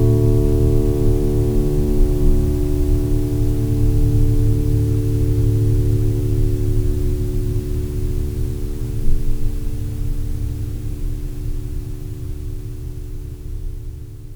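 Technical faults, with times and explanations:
No technical faults can be heard in this music clip. There is nothing here to time or explain.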